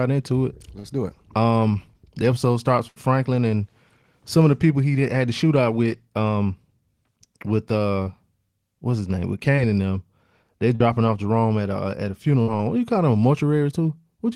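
It's a speech recording, and you can hear it's come over a lossy network link. There are three spots of short concealed packet loss, around 0.79 to 0.86 s, 8.04 to 8.08 s and 9.56 to 9.59 s. Each time a sliver of audio, 20 to 40 ms, didn't reach the decoder in time, and the receiver patched the hole by carrying the previous sound forward for roughly 14 to 41 ms before easing back into the real signal. You get a quick smear or wobble rather than an obvious dropout. The bigger hits are three bursts of packet loss, at 2.88 to 2.98 s, 10.75 to 10.82 s and 12.42 to 12.49 s. There, 40 to 80 ms went missing at once. The concealment stretches the last sound across the gap while fading it, so you hear a brief held buzz or dying hiss, and then the speech picks up further along with that chunk simply gone.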